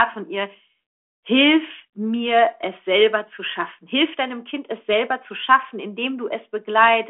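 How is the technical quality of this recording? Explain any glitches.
No glitches or technical faults can be heard in this speech recording. It has passed through G.726 ADPCM at 40 kbit/s on a telephone line band of roughly 250 Hz to 3.4 kHz, so nothing reaches above about 3.8 kHz, and any coding roughness on the speech is faint at most.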